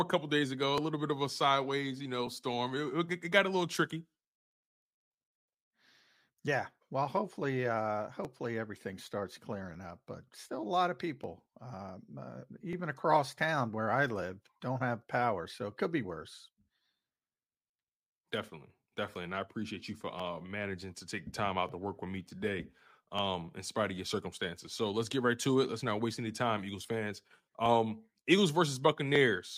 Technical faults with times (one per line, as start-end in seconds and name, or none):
0.78-29.16 clock drift buffer slips